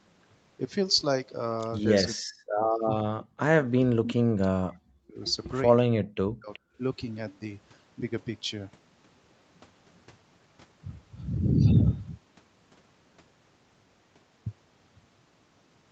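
From 2.03 to 2.7 s and again from 2.86 to 3.21 s the speech sinks by up to about 40 dB. This is speech suppressed in double talk, likely because the echo canceller mistook overlapping talk for echo and turned everything down. At 3.2 to 3.25 s a faint, delayed copy arrives roughly 383 ms late at about 25 dB below the speech. That is an echo leak, likely loudspeaker sound the canceller failed to remove. A brief dip of about 10 dB follows at 3.62 to 3.67 s. From 3.85 to 5.2 s there is a longer dropout of about 40 dB, and inside it, at 4.04 to 4.14 s, a much louder echo scrap, only about 10 dB under the speech. The speech is cut again from 5.97 to 6.52 s, and a last faint echo follows at 6.53 to 6.59 s.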